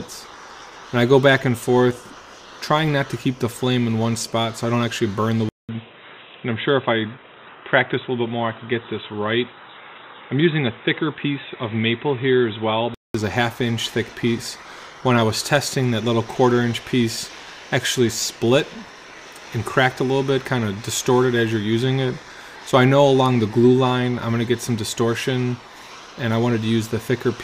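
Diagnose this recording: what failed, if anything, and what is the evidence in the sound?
At the driver stage, input likely switched to a poorer device from 5.49 to 13.15 s. After a 200 ms gap the sound goes dull, with nothing above 3.9 kHz.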